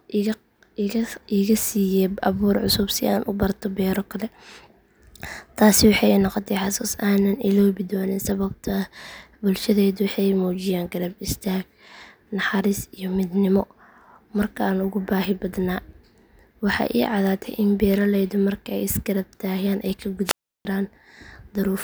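At 20.25 s the speech is briefly interrupted by a rise of hiss, then drops into near silence for about 0.34 s before returning by 20.65 s. This is a wireless microphone squelch dropout. The radio link from the analogue FM transmitter weakened enough that the noise in the demodulated signal climbed, and the receiver's squelch responded by muting its output until the carrier recovered and the audio path reopened.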